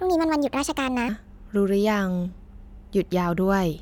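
Speech recording with a section at the wrong speed from 0.0 to 1.09 s: playback runs 1.38 times fast, raising pitch about five semitones, likely from a clock mismatch during editing.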